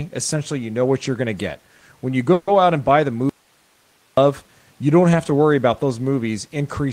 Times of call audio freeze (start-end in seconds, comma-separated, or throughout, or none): 2.33-2.49